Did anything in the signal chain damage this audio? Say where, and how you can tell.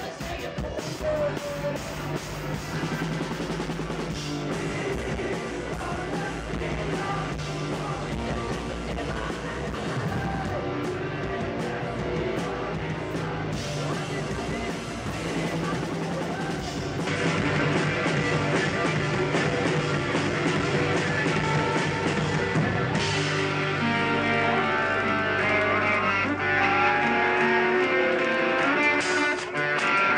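Yes. From 17.07 s to the end, the top above 9.4 kHz disappears with no gap, a modest level shift and a new noise floor well below the signal. That points to the driver stage, likely an input switched to a poorer device with narrower bandwidth.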